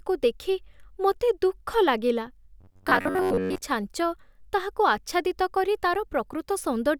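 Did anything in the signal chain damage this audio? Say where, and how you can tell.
Yes, the speech goes robotic from 2.61 to 3.62 s, right after "ଦେଖି ମୋତେ ଦୁଃଖ ଲାଗିଲା" and clearing before "ଛାଞ୍ଚ ତାହାକୁ ଆଚ୍ଛାଦିତ କରି". That's a classic case of robotic sound from repeated short buffers, likely at the driver or buffer stage. For most of that second, a chunk of about 10.7 ms gets looped while fresh audio is skipped. The looping stamps a steady 93.8 Hz buzz over everything, so it sounds metallic and fixed-pitch.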